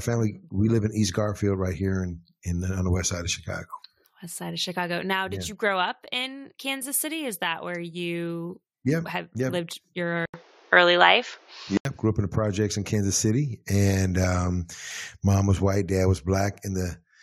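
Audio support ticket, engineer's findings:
Input likely switched to a poorer device, 10.26–11.85 s. Capture path loses everything above 7.2 kHz, so the speech goes dull and boxy. 80 ms dropout at the switch. New noise floor roughly 35 dB down. Level shifts a few dB.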